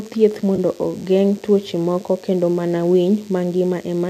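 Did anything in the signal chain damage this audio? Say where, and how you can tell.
Yes. DECT cordless phone buzz runs through the whole speech clip, a thin, steady buzz at 100 Hz with a dense stack of harmonics, about 30 dB below the speech. This is analogue wiring: a nearby handset or base transmits a burst every 10 ms, and the audio circuit rectifies it.

AAC frame loss with concealment occurs at 0.56 to 0.58 s, a brief smeared, phasey patch in the speech. This is a network or storage loss of about 20 ms of audio, which fits two lost 10 ms frames of the likely AAC-ELD stream. The decoder filled the gap by reusing the last good spectrum.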